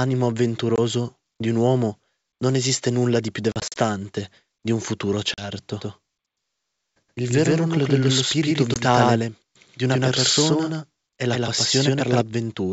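At 0.76 s the speech drops into a short, hard-edged hole of about 20 ms, then comes back slightly distorted and settles within tens of milliseconds. This is packet loss on an ADPCM call: missing audio is filled with silence, and the decoder's predictor and step size lose track of the sender's, so recovery is rough. The same happens at 3.52 to 3.79 s, where 120 ms goes missing in gaps scattered over 240 ms, the longest 40 ms, sounding like several lost packets. A 40 ms hole follows at 5.34 to 5.44 s, and a 20 ms one at 8.74 s.

From 5.80 s to 12.22 s every sound is followed about 150 ms later by an equally loud, dry, full-band repeat. The repeat has no decay or room colour and starts and stops abruptly. This is a doubled audio track, likely caused by the signal being picked up a second time through a slower path. The wideband G.722 coding underneath stays clear, with faint or no coding damage.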